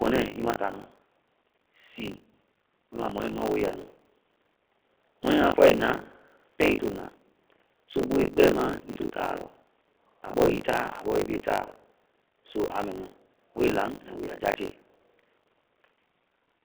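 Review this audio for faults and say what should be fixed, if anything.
The G.729 codec damage runs through the whole clip. Nothing above about 3.4 kHz survives, and the speech has the slightly rough, synthetic texture of a model-based coder that rebuilds each 10 ms frame from a filter, pitch predictor and sparse pulses, which fits G.729A at 8 kbit/s. Unlike plain band-limiting, the roughness is in the voice itself.

Buffer tearing is also present throughout, as a robotic buzz at 50 Hz. The writer and reader of the playback ring buffer cross every period, so roughly a third of each buffer replays audio from around 40 ms earlier, with hard joins on both sides. It differs from mains hum because it stops whenever the speech stops.

To prevent both, use a wideband codec such as G.722 or Opus on this path and keep the audio write pointer locked a safe distance ahead of the hardware read position.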